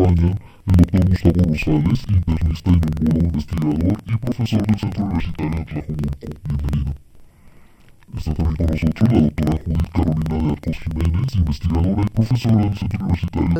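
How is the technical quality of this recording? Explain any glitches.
The recording has a serious channel-layout fault that lasts the whole clip: interleaved audio read as planar. Each block of alternating left and right samples is split so its first half plays as left and its second half as right, each stretched to fill the block. The sound drops a full octave, comes out doubled and choppy, and is chopped at about 21.5 Hz. That rate fits a 2048-sample block of about 46 ms. Unlike plain slowed playback, the overall pace stays correct.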